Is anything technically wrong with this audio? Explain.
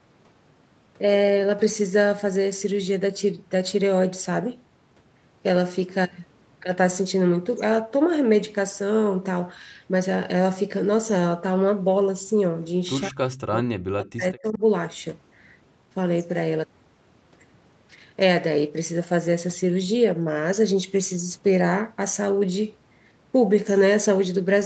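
Yes. From 13.08 to 14.61 s, the speech sinks steeply, likely speech suppressed in double talk. An echo canceller, hearing both sides at once, turned this talker down too.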